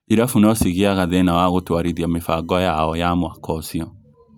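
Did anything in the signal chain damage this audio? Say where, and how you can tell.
Yes. There is USB whine in the analogue wiring, entering through power or ground. After "no cigĩaga", a steady 1 kHz tone sits under the speech from 1.0 to 3.0 s, roughly 45 dB down. Its fixed pitch matches the bus's 1 ms frame rate.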